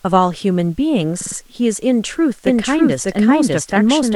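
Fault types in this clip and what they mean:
repeated frames: Around 1.20 to 1.36 s, a short block of about 42 ms replays three extra times, adding about 157 ms. It sounds like a rapid stutter, not a delayed copy, because the same fragment loops in place.
doubled audio track: From 2.47 s to the end, a second full-band copy runs roughly as loud as the original, about 0.7 s behind, likely from a second capture path or out-of-step edit. Unlike echo or reverb, it has no decay and begins abruptly.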